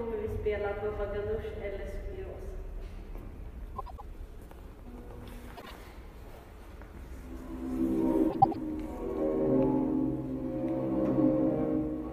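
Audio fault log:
3.76–4.02 s, 5.56–5.71 s, 8.30–8.56 s: frames out of order. In each case two neighbouring blocks of frames reached the decoder swapped and were played in that order. The blocks are about 105 ms each in the first and third events and about 52 ms in the second, which fits runs of four and then two frames. Each stretch plays its halves exchanged, giving a brief garbled flutter, while no time is lost.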